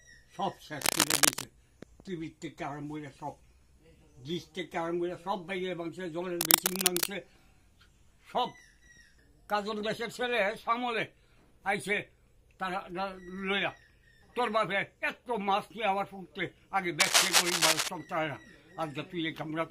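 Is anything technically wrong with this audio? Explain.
Yes. Three short bursts of scratchy, crackling rustle break over the sound, from 0.81 to 1.44 s, 6.41 to 7.07 s, and 17.00 to 17.90 s. Each is dense and uneven and sits about 5 dB louder than the sound beneath it. This is cable scratch noise, likely from a worn cable, connector or control being moved. The shifting contact resistance briefly injects irregular noise into the signal path.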